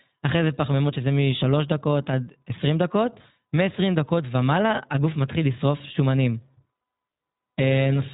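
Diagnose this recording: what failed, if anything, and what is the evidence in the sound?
The codec stage is the culprit: iLBC, running the whole way through. The speech tops out near 3.8 kHz and has that plainly rough, slightly synthetic edge, which fits 15.2 kbps narrowband coding where each 20 ms frame's excitation is coded on its own.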